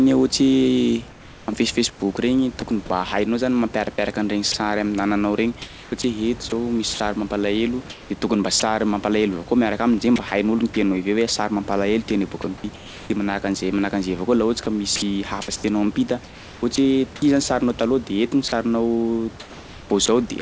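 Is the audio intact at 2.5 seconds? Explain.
No. At 2.5 seconds the audio is in a stretch of comfort noise in place of the background, running from about 1.10 to 2.62 s. The real room noise, which sits about 22 dB below the speech, is replaced for roughly half a second by a steady, featureless hiss with none of the original background's texture. This is likely discontinuous transmission: the sending side stopped transmitting during the pause, and the receiver synthesised noise roughly matching the background's level and spectrum to fill the gap.

Just after that point, from 2.60 to 2.62 s, there is sound dropped by the voice detector. A 20 ms piece of the actual sound is lost and the same synthetic noise stands in for it, likely because the detector classed that sound as background and held transmission off until it triggered again. It is heard as the sound very briefly giving way to steady noise.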